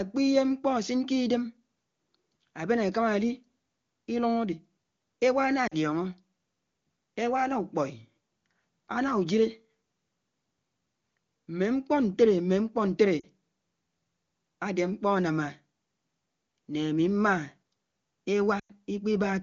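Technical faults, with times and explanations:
5.67–5.74 s, 13.20–13.26 s, 18.59–18.72 s: lost AMR speech frames. The decoder repeats its last settings at falling gain, giving short dips toward silence; the 100 ms loss stays silent longest.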